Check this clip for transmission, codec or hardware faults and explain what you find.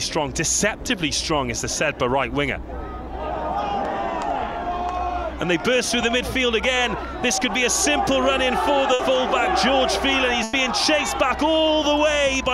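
Two bursts of packet loss occur, at 8.93–9.01 s and 10.43–10.55 s. Each time, consecutive packets arrived too late or not at all. The receiver stretched and faded the last sound for about 60 ms, then 100 ms, giving a short held buzz or hiss before the audio skips ahead.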